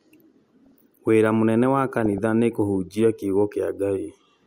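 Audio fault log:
0.65–0.72 s and 2.06–2.18 s, DAB burbling: brief noise blips in single sub-bands before "wĩra mũnene wa" and "nĩ kũhunjia kiugo", as weak-reception bit errors corrupt the MP2 audio data.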